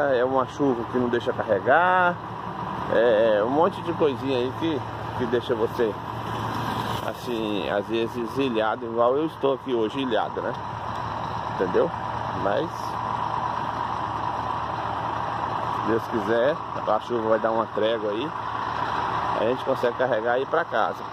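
Dropped samples at 9.08 s: a single sharp click. A tiny piece of the stream, a couple of samples, roughly a twentieth of a millisecond, is likely missing, so the waveform leaps straight from one value to a later one instead of moving smoothly between them. The gap is far too brief to remove any audible sound. What remains is the abrupt step itself, heard as one click and seen as a thin vertical line running across the spectrum.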